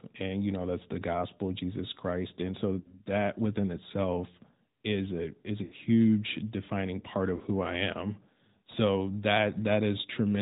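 Throughout, the speech carries the AMR narrowband mobile codec: a hard ceiling at 4 kHz, empty above that on a spectrogram, and a buzzy, synthetic edge that suggests a mid-rate mode of about 10 kbps, with vocal-tract modelling replacing the fine detail of the waveform.

Lost AMR speech frames then appear three times. From 2.80 to 2.95 s, after "and so", about 60 ms of concealment is heard. From 5.64 to 5.74 s, after "is a is a", it lasts about 80 ms. From 7.36 to 7.43 s, before "who I am", it lasts about 40 ms. The decoder repeats the last pitch and spectral settings at falling gain, so the sound smears and dips. A spectrogram shows a held harmonic pattern fading out, and the waveform shows a shrinking envelope, consistent with two to four 20 ms frames lost.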